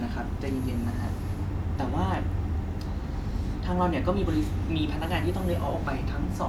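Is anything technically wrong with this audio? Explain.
No, nothing technical stands out here; the recording sounds just as it should all the way through.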